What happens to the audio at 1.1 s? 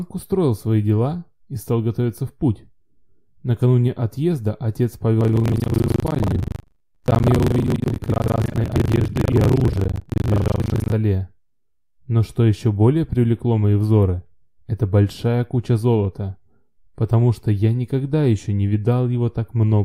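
Nothing goes wrong at 1.1 s; the audio plays through that moment intact, with no dropout, click or other fault.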